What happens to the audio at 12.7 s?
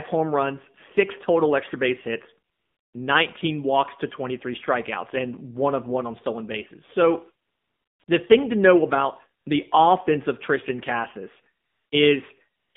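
From 12.60 to 12.74 s, AMR comfort noise replaces the background: with no speech frames for 140 ms, the receiver synthesises steady, smooth noise, seen as a flat, featureless band on the spectrogram and a low, even waveform. Throughout, the AMR narrowband mobile codec confines the audio to roughly 150 Hz to 3.6 kHz, with an empty spectrogram above, and adds plainly audible buzzy, synthetic coloration consistent with a low bitrate near 7.4 kbps.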